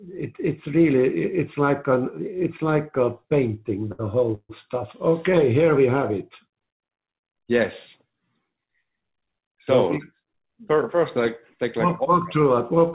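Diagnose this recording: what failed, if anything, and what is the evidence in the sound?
Network, jitter buffer: a short stall from a late packet at 3.92 to 4.01 s holds the sound 66 ms, then resumes with nothing lost.

Network: from 4.35 to 4.51 s the sound is stretched and fades, with 40 ms of silence, then resumes intact; likely a call audio freeze from delayed packets.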